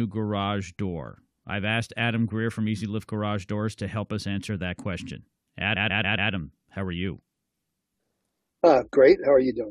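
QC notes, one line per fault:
5.75 to 6.31 s, repeated frames: Right after "us answer that question", a 139 ms slice of speech plays four extra times before "how are you" continues. It is heard as a stutter. The slice length fits a run of about six compressed frames written or sent again. The decoder plays each copy in full, so the clip runs about 0.56 s longer.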